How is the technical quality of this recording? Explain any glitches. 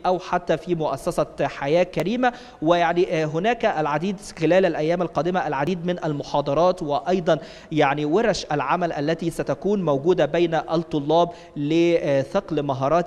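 The recording has five brief glitches at 1.12, 2.00, 5.67, 9.24 and 10.77 s, each a point where the audio jumps forward with no gap. This is likely a dropped buffer (overrun): unread samples were overwritten, losing a few milliseconds (about 20 ms at 5.67 s). The waveform shows an abrupt discontinuity, and the spectrogram shows a thin vertical broadband line.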